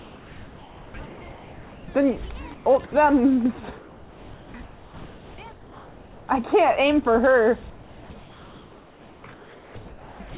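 Likely discontinuous transmission: the sender stopped sending during pauses, so the receiver put comfort noise in place of the background at 0–1.88, 2.54–2.66, 3.78–4.54, 5.52–6.28 and 7.7–10.2 s. Each gap becomes a steady, featureless hiss, about 2–3 dB quieter in the middle three.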